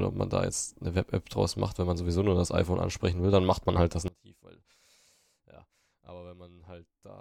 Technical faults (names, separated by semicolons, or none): one channel inverted